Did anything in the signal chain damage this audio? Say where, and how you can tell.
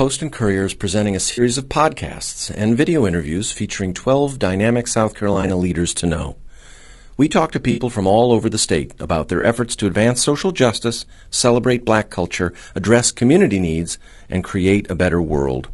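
Yes. Low-delay AAC compression runs through the whole clip. The speech is plainly rough and grainy, with noise filling the gaps between harmonics and a top band that sounds lowered or synthetic. That points to the codec stage, most likely AAC-ELD, the low-delay AAC used on video calls, at a bitrate around 32 kbps. At that rate the coder has too few bits for its roughly 500 spectral lines per frame, so the quantisation noise shows.

AAC frame loss with concealment is a network-stage fault heard four times: 1.31 to 1.41 s just before "of podcasts and video", 5.33 to 5.50 s just before "leaders to know", 7.71 to 7.80 s, and 9.41 to 9.44 s between "over the state about" and "efforts to advance social". Each is a short smeared, noisy or phasey patch where the decoder rebuilt missing frames from the last good spectrum. The first three each total about 60 ms, which fits three 20 ms frames. At 5.33 s that loss is scattered over 160 ms in runs of about 20 ms. 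The last is a single 20 ms gap.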